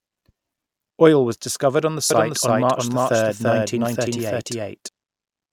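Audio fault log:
2.11–4.89 s, doubled audio track: right after "was discovered on the", a second full-band copy of the speech enters abruptly, trailing by roughly 300 ms at about the same level as the original, and cuts off just as sharply. It likely comes from a second, slower capture path mixed back in. With no decay or room colour, it reads as a clean stutter rather than an echo. On a spectrogram every harmonic pattern appears twice, offset horizontally, with hard vertical edges at both ends.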